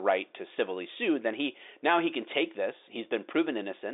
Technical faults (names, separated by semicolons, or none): none